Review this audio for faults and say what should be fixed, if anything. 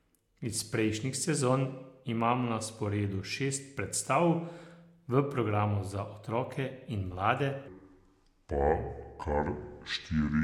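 A section at the wrong speed runs from 7.68 s, right after "za otroke in mlade", to the end at 10.43 s. The likely cause is that the player or editor used the wrong clock, so the audio plays at 0.674 times its recorded speed, dropping pitch by about seven semitones and sounding deep and dragged. To prevent it, check that every segment's sample rate matches the session clock before editing or export.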